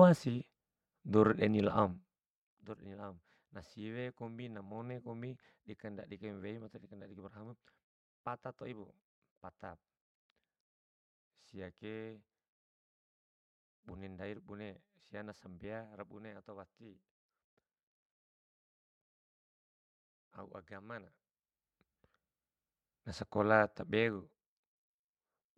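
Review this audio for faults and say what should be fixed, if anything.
A fine ticking, like a zip being drawn, rides on the speech from 1.84 to 2.74 s, between "dour de'ni" and "de'ni laom na siwe", and again from 23.88 to 24.38 s. This is zipper noise. The level drops by roughly 15 dB and then 10 dB in unsmoothed 1 dB steps, around twenty per second, and each jump clicks. To fix it, ramp gain per sample or interpolate it across each block.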